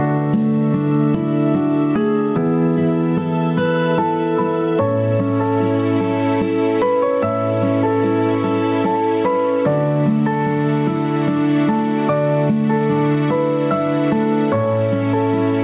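Gain pumping runs through the whole clip, likely from input gain set far too high with a fast limiter clamping each loud sound. The gain swings by roughly 10 dB, leaving the sound squashed within a narrowband call path with nothing above 4 kHz.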